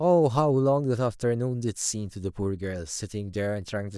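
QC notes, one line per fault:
No faults heard on this speech clip; nothing to flag.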